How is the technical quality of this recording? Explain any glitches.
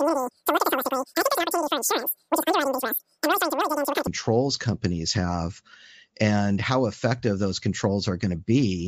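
The first half of the speech has one clear playback fault. Wrong sample rate, 0 to 4.07 s: samples play about 2.76 times too fast, fitting 16 kHz audio read at 44.1 kHz, so the voice sounds chipmunk-high, about 17.6 semitones up, and rushed.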